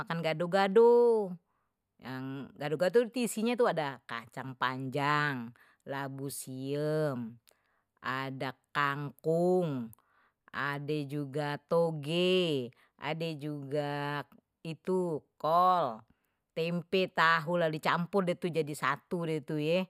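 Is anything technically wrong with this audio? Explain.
No, nothing technically wrong can be heard in this speech recording. There is no moment in it that shows a technical fault.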